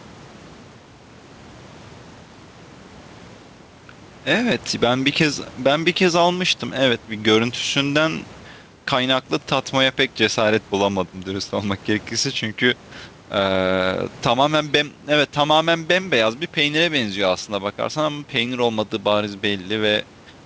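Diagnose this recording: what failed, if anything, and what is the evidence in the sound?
Gain pumping runs through the whole recording, most likely from input gain set far too high with a fast limiter or compressor in the call processing pulling it back down. The room noise sits about 31 dB below the speech, and the gain swings by around 10 dB. Unlike a noise gate, the background never cuts out. Nothing is heard above 8 kHz, as expected from a G.722 path.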